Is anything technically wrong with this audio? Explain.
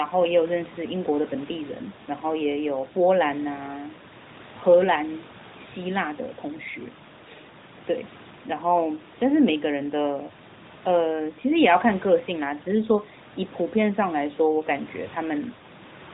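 No, nothing is technically wrong.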